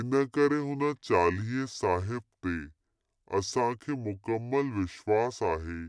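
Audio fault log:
throughout, wrong sample rate: playback is slower than recording, fitting 32 kHz audio played at 22 kHz, so speech runs at 0.69 speed and sounds 6.45 semitones low and dragging.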